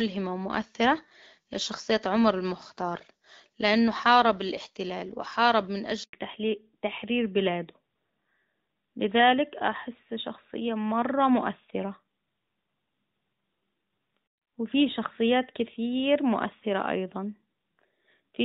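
A recording of speech that cuts out abruptly at 6.03 s: the sound fades within a few tens of milliseconds and stays silent for 100 ms, until 6.13 s, and whatever was said in that moment is simply missing. This is a handover gap. The call was passed from one network link to another, and no speech frames were delivered while the switch happened, so the decoder had nothing to play until the new link came up. From 6.13 s to the end, the speech sounds duller and rougher, with the airy sibilance and crispness gone, because nothing above 4 kHz survives. This is a fallback to narrowband. After the handover the call dropped from HD Voice to the older AMR narrowband codec, which fits its 12.2 kbit/s mode, and that codec only carries the traditional telephone band. Before the switch the wideband AMR-WB path is audible, with its light codec texture consistent with the 12.65 kbit/s rate, and it reaches noticeably higher in frequency.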